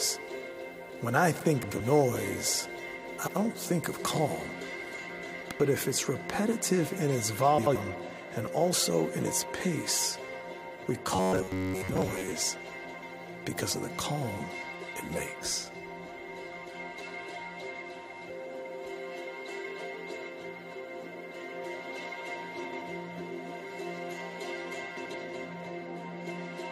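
Frames out of order: pairs of neighbouring runs, each about 85 ms and consistent with four frames, were decoded swapped, giving brief garbled flutters at 1.63, 3.18, 5.42, 7.58, 12.85, 22.64 and 24.96 s. Robotic sound from repeated short buffers, likely from audio arriving too seldom with a short buffer looped over most of the gap, turns 11.16 to 12.33 s into a rigid metallic buzz at 93.8 Hz.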